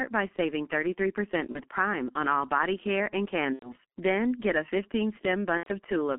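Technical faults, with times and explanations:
Throughout, G.723.1 codec: the speech is muffled and hoarse, with consonants smeared together. The band stops near 200 Hz and 3.4 kHz, and the codec's slowly updated voice model, which fits a rate of about 6 kbit/s, blurs transitions. A spectrogram shows a hard ceiling and soft, smeared formants.
1.52–1.62 s, 3.53–3.75 s (just after "all body care and") and 5.57–5.69 s, VoIP packet loss concealed by the speech codec: the decoder repeats its last pitch and filter, so the sound stretches into a fading buzz or coloured noise. It stays weak briefly afterward. The first gap fits one lost 30 ms frame, the others about 90 ms. A spectrogram shows frozen, flat harmonics, and the waveform envelope decays steadily.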